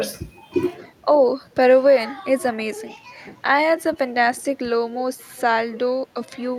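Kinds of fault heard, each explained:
Speech suppressed in double talk: at 2.55 to 2.62 s the voice drops by roughly 20 dB for about 70 ms, and again at 4.53 to 4.79 s it sinks by around 10 dB over roughly 150 ms of that span. The likely cause is an echo canceller that heard both ends talking together, could not tell the near talker from the loudspeaker return, and pulled the whole signal down to be safe.
Echo leak: at 4.37 to 4.42 s and again at 5.19 to 5.41 s a faint, delayed copy of the speech comes back 241 ms behind the original, at about 35 dB and then about 30 dB below the voice. This is likely a far-end loudspeaker being picked up by its own microphone, with the echo canceller there leaving a residue that travels back down the line as brief scraps.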